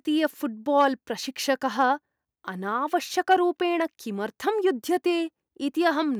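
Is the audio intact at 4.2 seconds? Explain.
Yes, at 4.2 seconds the speech plays through cleanly, with no dropout, click, distortion or other audible fault.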